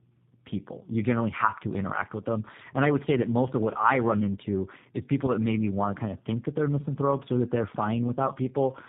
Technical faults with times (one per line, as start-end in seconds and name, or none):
0.00-8.88 tandem speech coding